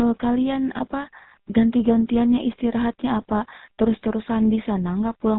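From start to finish the speech carries GSM full-rate codec damage: a buzzy, gravelly roughness from pulse-driven vocal-tract modelling, consistent with the original 13 kbps coder, and nothing above 4 kHz. Plain telephone band-limiting would muffle the sound without that grating buzz.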